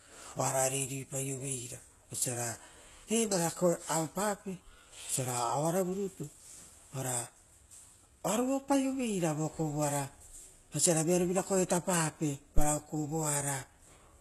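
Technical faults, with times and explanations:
throughout, HE-AAC compression: The encoding is likely HE-AAC at a very low bitrate, in the region of 16 kbps. Only the lower spectrum is properly coded, and the treble is rebuilt by copying lower bands upward under a coarse envelope. The highs sound present but synthetic, with harmonics that don't line up across the crossover, s sounds that turn gritty and lispy, and nothing above 12.3 kHz. The coding damage is plainly audible.
12.58 to 12.66 s, phantom power thump: Just after "oisira vearo vira koetapape", phantom power or a similar supply is switched on a live input. That voltage step passes through the coupling capacitors as a single low-frequency pulse. It is heard as a deep, brief thump whose tail dies away within about 18 ms. It sits on the sound as a dull knock rather than a click, because the step's energy is concentrated at low frequencies.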